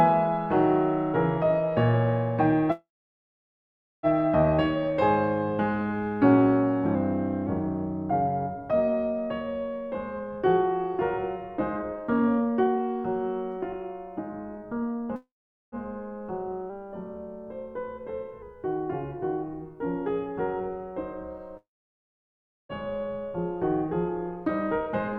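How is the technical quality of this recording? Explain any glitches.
The recording has clear transmission glitches in the music: three dropouts, two brief pitch shifts, and two stretches where the tempo rushes.

Call audio freeze, at 2.71–4.06 s, 15.16–15.75 s and 21.57–22.72 s. Each time, the music stops, a fading tail of the last sound trails into silence (about 1.2 s, 0.44 s and 1.0 s of silence respectively), and then the music resumes exactly where it left off. The likely cause is delayed packets draining the jitter buffer. Nothing is lost, but each pause pushes the rest of the music later.

Drift correction step, at 6.95–7.47 s and 16.70–18.42 s. In the first, everything slows by about 6% and drops roughly a semitone (about −109 cents). In the second, it speeds up by the same amount and rises about +103 cents. The likely cause is clock-matching software changing the playback rate in one jump to rebalance its buffer, which makes speed and pitch move together.

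Jitter buffer speed-up, at 10.11–15.10 s and 23.86–25.15 s. The music hurries without changing pitch, running at 119% speed in the first stretch and 113% in the second, so the tempo no longer holds steady. To work off excess buffered delay, the receiver repeatedly cut tiny pitch-period slices, around a second in total in the first stretch and a fifth of a second in the second.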